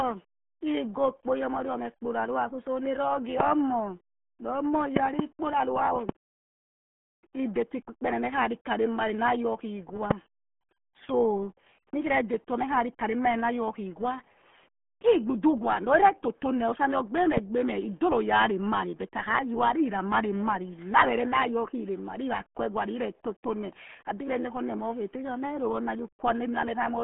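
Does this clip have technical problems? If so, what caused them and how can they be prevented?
Yes. RealAudio 14.4 codec damage runs through the whole speech clip. Nothing above about 3.8 kHz survives, and the band is squeezed to roughly 150 Hz to 3.4 kHz, which fits an 8 kbit/s dial-up-era stream. The coarse coding leaves the voice muffled and gargly. To prevent it, record or archive from the original source with a modern codec at an adequate bitrate instead of this legacy format.

Loud pops occur at 4.97 to 5.22 s, where there is a double pop, at 6.09 to 6.12 s, and at 17.37 to 17.40 s. Each sharp transient jumps about 20 to 25 dB above the speech, which continues underneath. The likely cause is a voltage spike from a connector, a switch, static or a driver glitch. To prevent them, secure the cables, avoid switching or plugging in while recording, and keep audio drivers stable.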